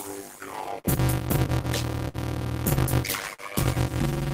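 From start to finish, a block size mismatch (padded) puts a 100 Hz buzz under the sound and slows it to about 0.53 times normal speed without lowering the pitch. That fits 256-sample blocks zero-padded to about 480. A sample-rate error would drop the pitch as well.

Clock drift between sender and receiver also runs throughout, with the sender roughly 4% slow. Small timing hiccups recur at uneven intervals all through the clip, unlike the isolated held moments described next.

Short stalls from a late packet occur at 0.80–0.87 s, 2.08–2.17 s and 3.34–3.42 s. Each holds the last sound for about 46, 58 and 46 ms, then carries on. Nothing is skipped, which separates these from dropouts.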